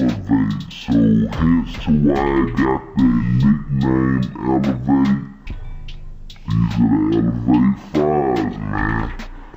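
Stereo read as mono runs from start to finish: interleaved left and right samples are played back one after another as a single channel, doubling the sample count, so the audio crawls at half speed, an octave low, with a faint mirrored image in the upper spectrum.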